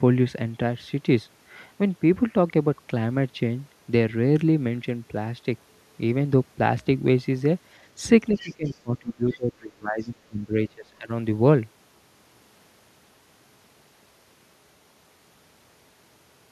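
Speech, with speech suppressed in double talk from 8.31 to 11.1 s: for roughly two seconds the talker dips by about 25 dB at worst, likely an echo canceller ducking both sides during overlap. The other side's voice leaks through faintly, well below the talker, at 8.36–8.77 s and 9.32–9.37 s, likely loudspeaker echo left uncancelled at the microphone.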